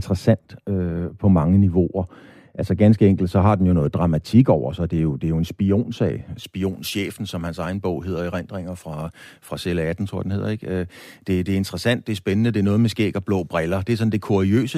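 Speech, with de-emphasis applied wrongly from 0 to 6.44 s: a treble cut meant to undo pre-emphasis, applied to audio that had none or applied twice, leaves the sound dull, about 11 dB down at 10 kHz relative to 1 kHz. Unlike a low-pass filter, the loss slopes gradually rather than cutting off abruptly.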